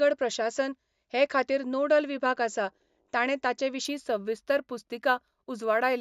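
From 3.85 s, right after "आसा ताणें ताचे", to the end at 6.01 s, the speech shows imaging from linear upsampling. The rate was raised by joining samples with straight lines, which fits a move from 16 kHz to 48 kHz. That weak interpolation softens the top of the original band and leaves a mirrored copy between 8 kHz and 16 kHz, roughly 35 dB down. It is heard as a faint metallic shimmer on sibilants. Unlike aliasing, the images sit above the original band rather than folding into it, and the top is dulled, not cut cleanly.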